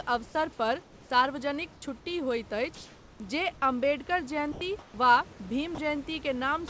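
From 0.83 to 1.10 s, just before "सार्वजनिक छुट्टी होइत", the room background gives way to comfort noise, likely from discontinuous transmission: a steady, featureless hiss about 3 dB quieter. The same substitution returns from 2.75 to 3.20 s, after "पर सार्वजनिक छुट्टी होइत", this time about 1 dB louder than the real background. At 4.52 to 4.61 s, sound is dropped by the voice detector, which likely mistook the sound for background; about 40 ms of speech is replaced by flat noise. Comfort noise again fills 4.79 to 4.94 s, about 1 dB quieter. At 5.75 to 5.78 s a further 30 ms of speech is likely lost to the voice detector and heard as a brief stretch of noise. Throughout, nothing is heard above 8 kHz, which fits a G.722 call path.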